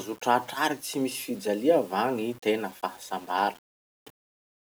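No technical faults can be heard anywhere in the speech signal.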